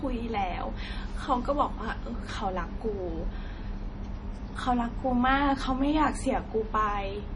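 Throughout, nothing remains above 10.5 kHz. The speech sounds watery and swirly. This is likely heavy MP3 compression, fitting a bitrate near 32 kbps.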